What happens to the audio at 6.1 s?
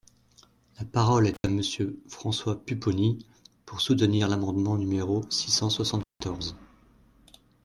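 A loose cable or plug briefly loses contact, an intermittent contact fault, from about 6.00 to 6.22 s, just after "l’amendement numéro six cent". The speech drops out for roughly 171 ms with crackle at both edges, leaving faint hiss while the connection is open.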